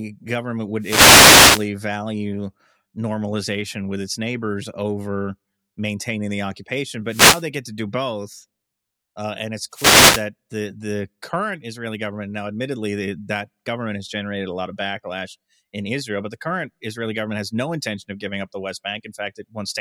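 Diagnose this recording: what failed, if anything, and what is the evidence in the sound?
The failure is in the analogue radio link. Three wireless microphone noise hits occur in the speech, from 0.79 to 1.68 s, 7.07 to 7.46 s and 9.71 to 10.26 s. Each is a swish of static. Reflections cancel the FM carrier, and receiver noise rises over the signal.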